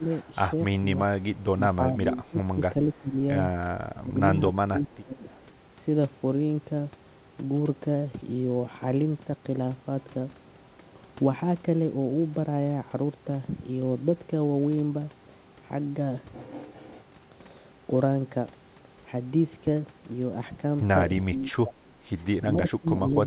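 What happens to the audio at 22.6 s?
At 22.6 s the echo canceller is likely failing under double talk: it cannot tell the near talker from loudspeaker echo and attenuates both. This is speech suppressed in double talk, from 21.26 to 23.26 s, with the speech dipping by up to around 20 dB.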